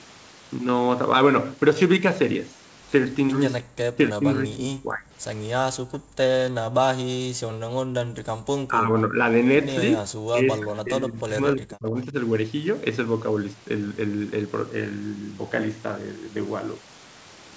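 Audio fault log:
3.86–5.1 s: speech suppressed in double talk. The speech dips by roughly 30 dB, likely because the echo canceller mistook overlapping talk for echo and turned it down.
5.73–6.17 s, 6.53–6.8 s and 7.04–8.4 s: background gated by the echo canceller. The room sound drops out, about 40 dB down, while the far end plays, then returns.
8.68–9.16 s, 10.02–10.1 s and 10.3–12.15 s: speech suppressed in double talk. The speech dips by about 15 to 35 dB, likely from echo suppression during overlapping talk. The longest loss runs almost two seconds.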